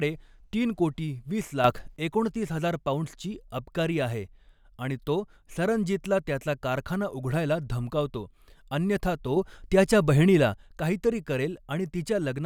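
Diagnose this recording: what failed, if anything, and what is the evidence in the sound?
A sudden gain jump of about 6 dB hits the speech at 1.64–1.96 s and again at 9.37–10.54 s, just after "धमकावतो अन्यथा". Speech and noise floor step together, showing as a square-edged envelope step and full-band spectrogram brightening, likely an unramped digital gain change in the driver.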